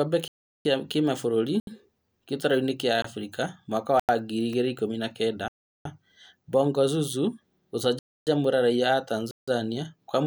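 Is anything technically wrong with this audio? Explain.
Yes. The speech drops out seven times, in blocks of digital silence at 0.28–0.65 s, 1.60–1.67 s, 3.02–3.04 s, 4.00–4.09 s, 5.48–5.85 s, 7.99–8.27 s and 9.31–9.48 s. Samples were zeroed, likely because the output buffer went unfilled in time. The two 372 ms holes fit a 16384-sample buffer. The gaps are heard as short holes in the speech. Unlike a natural pause or a faded dropout, each gap starts and ends abruptly, with no room tone underneath.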